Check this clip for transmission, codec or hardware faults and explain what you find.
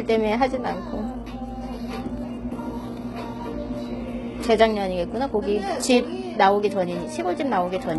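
HE-AAC compression, likely, runs throughout the clip. The lower spectrum is coded directly and the treble is rebuilt by copying lower bands upward, which fits a very low bitrate near 16 kbps. Above the crossover the highs sound gritty and metallic, and nothing reaches past 11.8 kHz.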